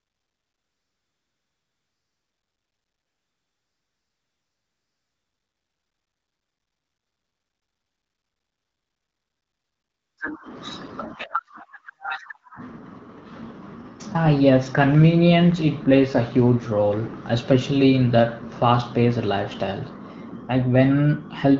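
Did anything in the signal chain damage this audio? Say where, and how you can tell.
Yes. From 0.0 to 10.17 s, a steady, smooth synthetic hiss replaces the real background: AMR comfort noise, generated by the codec after the phone stopped sending speech frames.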